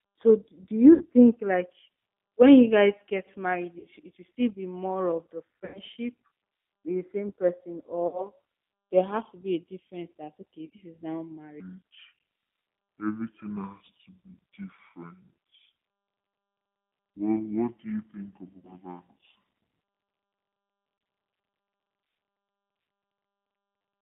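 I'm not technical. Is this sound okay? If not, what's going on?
No. Three separate problems can be heard.

The whole recording has passed through the G.729 codec, a phone-call compression system that rebuilds speech from a simplified model. It sounds thin and slightly rough, with nothing above about 3.5 kHz. Unlike a simple muffled recording, it has a faintly synthetic edge.

VoIP packet loss concealed by the speech codec occurs at 0.94, 3.79, 5.65, 8.07, 10.66, 18.58 and 20.98 s. Each time, pieces of the call went missing, mostly about 60 ms' worth (90 ms at 5.65 s, 30 ms at 20.98 s). The decoder filled each gap by stretching the last sound and letting it fade. That is different from a clean dropout to silence.

From 11.6 s to the end, the section plays at the wrong speed, at about 0.6 times normal, so the speech is slow and roughly ten semitones deeper. Speed and pitch drop together, which points to a playback clock mismatch as the likely cause rather than a voice effect.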